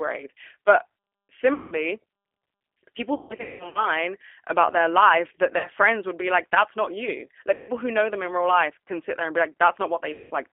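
Speech sent through a G.729 codec, whose sound fits an 8 kbit/s coder, comes out confined to roughly 250 Hz to 3.5 kHz, with a plainly rough, synthetic texture throughout. VoIP packet loss concealed by the speech codec then strikes five times: at 1.54–1.79 s (about 180 ms lost), 3.15–3.87 s (420 ms scattered over 600 ms), 5.58–5.68 s between "about their life that" and "friends would be like" (60 ms), 7.54–7.72 s between "like that's not you" and "who know them in" (150 ms), and 10.13–10.33 s (180 ms). At each, the decoder stretches its last frames into a fading buzzy tone or coloured noise, and the voice stays weak or smeared briefly afterward.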